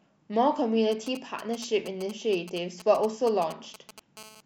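A nearby 2G phone's radio bursts are being rectified by the audio circuit from 0.92 to 4.00 s: GSM signalling bursts give a galloping pattern of ticks and brief 217 Hz buzzes, roughly 15 dB under the speech. From 4.17 to 4.41 s, continuous transmission at 217 Hz, consistent with a call, produces GSM phone buzz, a hard, raspy, harmonic-rich tone about 20 dB below the speech.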